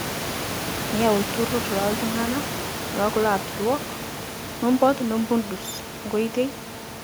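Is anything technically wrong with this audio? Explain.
No, nothing in the signal chain is at fault; the background room noise, sitting about 10 dB below the speech, belongs to the recording space rather than the system.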